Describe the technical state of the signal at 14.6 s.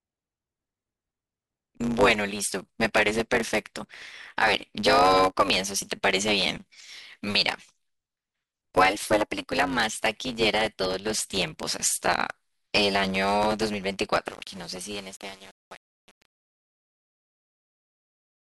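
Truncation distortion on a fade runs from 14.3 s to the end at 18.54 s, and 14.6 s falls inside its worst stretch. A fade-out is under way here, but the level stage behind it keeps too few bits and adds no dither, which fits a word length of about 7 bits. As the signal drops toward the smallest step, the waveform collapses into coarse square steps. The fading sound turns gritty.

A block size mismatch (truncated) is also present at this moment and throughout the clip. One stage hands over longer blocks than the next stage reads, so the tail of every block is discarded. The repeated cut sets up a buzz at about 100 Hz, the block rate. Because material is dropped from every block, the speech plays about 1.09 times faster while its timbre stays the same.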